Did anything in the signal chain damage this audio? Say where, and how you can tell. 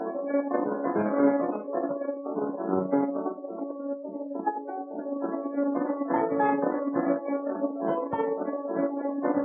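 No signal-chain damage is audible.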